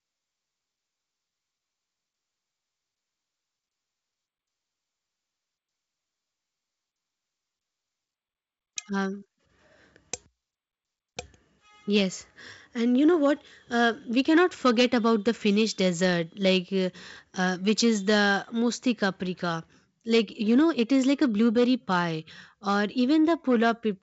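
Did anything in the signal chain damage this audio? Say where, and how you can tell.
No, nothing stood out on listening; the speech comes across as ordinary G.722 wideband telephone coding at 64 kbit/s, with the top of the band stopping at about 7.7 kHz as that path would give.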